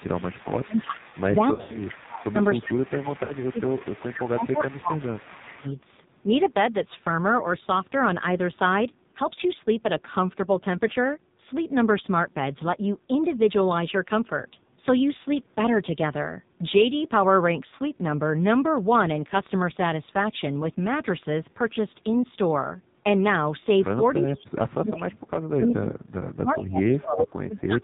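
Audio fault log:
Throughout: AMR narrowband mobile codec. The speech passes through the AMR-NB mobile codec at a low rate, with heavy damage. The sound fits roughly 5.9 kbps. Nothing above 4 kHz survives, so the voice is muffled and telephone-thin. Each 20 ms frame is rebuilt from a vocal-tract model driven by only a few pulses, and with so few bits that model gives the voice a buzzy, synthetic edge. Any background sound turns into a swirling warble.
1.54–1.88 s and 3.24–3.33 s: lost AMR speech frames. In the first stretch, 160 ms of frames drop out in pieces scattered over about 200 ms, and the longest unbroken gap is 80 ms. The second loses 60 ms of frames. For each missing frame the decoder repeats the last good pitch and vocal-tract settings at falling gain. The sound smears, warbles and sags, then comes back briefly weak and rough.
24.22 s to the end: speech suppressed in double talk. 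Over roughly 3 s of this stretch the talker's level keeps dipping, losing its top end and cutting out in pieces, at its deepest by about 35 dB. The likely cause is an echo canceller facing simultaneous talk from both ends. Unable to tell the near talker from loudspeaker echo, it turns down everything it hears.
24.94–25.03 s, 25.74–25.79 s, 26.52–26.64 s, 27.18–27.24 s: echo leak. Short scraps of a delayed copy of the voice arrive about 0.4 s behind the original. The first three sit about 15 to 20 dB below the speech, and the last is about as loud as the speech itself. These are likely residue from a loudspeaker on one side of the call, which its echo canceller failed to remove completely before sending back.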